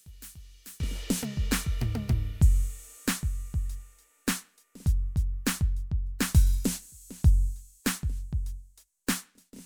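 From 0.0 to 0.8 s, the music drops by about 26 dB and turns faint. The centre nearly disappears. The likely cause is one channel inverted, so the shared content cancels when the two channels sum to mono.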